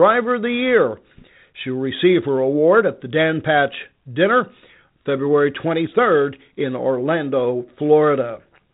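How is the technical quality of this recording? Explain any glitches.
No glitches or faults heard.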